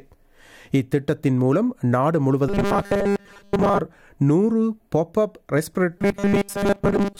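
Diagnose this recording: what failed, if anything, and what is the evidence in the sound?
Robotic sound from repeated short buffers appears from 2.49 to 3.80 s and again from 5.98 s to the end: a rigid 200 Hz buzz, fitting a 5 ms chunk replayed while most real audio is skipped. Likely a driver or buffer underrun.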